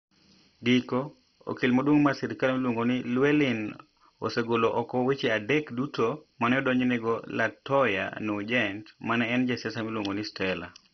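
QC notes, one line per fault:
Throughout, MP2 compression: the speech sounds dull and gurgling, with a granular grit and nothing above about 6.1 kHz. This is likely heavy Layer II coding at a low rate, which fits around 32 kbps. Upper sub-bands are switched off and the remaining ones are coarsely quantised. A spectrogram shows a hard ceiling near 6.1 kHz and blocky, flickering energy patches beneath it.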